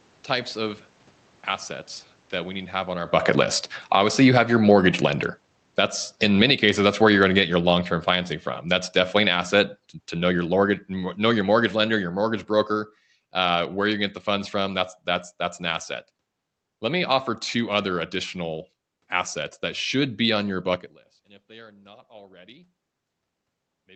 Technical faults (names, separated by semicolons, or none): automatic gain falling